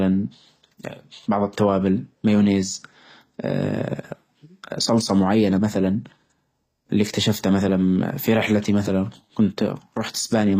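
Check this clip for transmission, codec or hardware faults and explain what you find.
The speech runs through HE-AAC compression the whole way: treble above roughly 15.5 kHz is gone, and the upper band sounds rebuilt, likely by low-bitrate band replication, so sibilants come out gritty and metallic.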